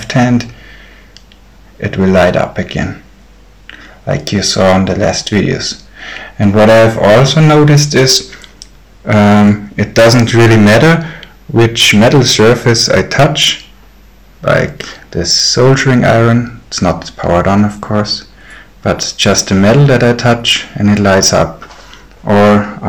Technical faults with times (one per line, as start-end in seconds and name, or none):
0.00-22.89 hard clipping